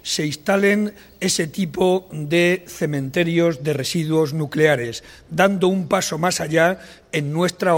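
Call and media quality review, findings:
Video or display buzz, 0.00 to 3.34 s. Low buzz at 59.94 Hz with hash above it, plus a high tone at 15.7 kHz. Sits well under the programme, roughly 35 dB down. Probable component: screen or video cable near the audio path. Mechanism: field-rate and line-rate currents coupling into the audio wiring. Stops at 3.34 s.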